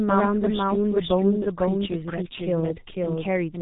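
Speech runs throughout with a doubled audio track: an equally loud, full-band second copy trails about half a second behind, likely from a slower capture path, and shows on the waveform as repeated envelope shapes. Heavy G.723.1 codec damage makes it muffled and hoarse with smeared consonants, consistent with roughly 6.3 kbit/s, and the spectrogram shows nothing above 3.8 kHz.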